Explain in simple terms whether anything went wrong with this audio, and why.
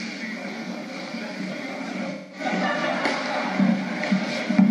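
Around 2.10 to 2.42 s there's a dropout from AAC frame loss with concealment. A chunk of about 0.2 s never arrived, so the decoder patched the gap by reusing the last good sound, leaving a smeared, hollow stretch that fits roughly five lost frames.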